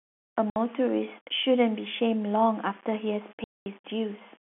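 The speech was likely quantised to very few levels and rounded with no dither, which fits roughly a 7-bit word. Because the rounding error tracks the signal, a grainy, level-dependent distortion sits around 25 dB below the speech throughout, rougher on quiet syllables and trailing sounds, on top of the narrow telephone band of the G.711 line.

At 0.50 s, packet loss filled with silence drops the audio for 60 ms, until 0.56 s, a gap that fits three 20 ms packets. The receiver put silence where the speech should have been, so the sound stops dead and resumes at hard edges. A longer hole follows from 3.44 to 3.66 s, 220 ms of silence that fits eleven missing packets, cutting a chunk out of the speech.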